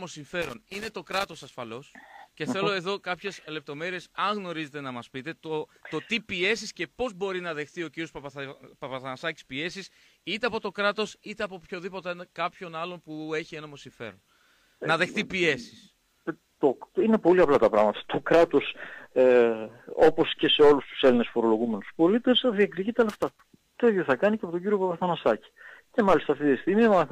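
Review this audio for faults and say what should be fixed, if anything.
Loose connector crackle shows up twice, from 0.42 to 1.53 s and again from 23.09 to 23.41 s. It's an irregular burst of scratchy crackle where a worn or dirty contact keeps making and breaking, chopping the signal. Reseat or clean the connectors, or swap the cable, and strain-relieve it so it can't shift mid-take.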